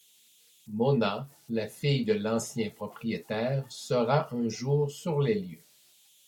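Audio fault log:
Throughout, converter idle tones. A faint whistle near 3 kHz sits in the pauses between phrases, and grainy noise lies under the quiet parts of the speech, about 35 dB below the signal. An undithered delta-sigma converter settles into repeating bit patterns at low levels, and those patterns produce the tone.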